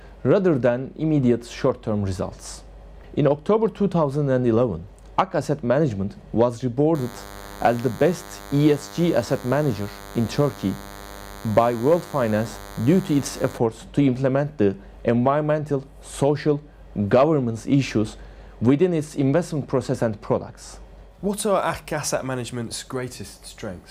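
From 6.95 s to 13.58 s a DECT cordless phone buzz sits under the sound, well below it in level. A nearby handset or base station transmits a brief radio burst every 10 ms, and the audio circuit rectifies each one, producing a thin, steady buzz at 100 Hz packed with harmonics. That hard, pulse-like edge is what separates it from mains hum, which has a smoother tone, and from ground-loop hum at 50 or 60 Hz and their multiples.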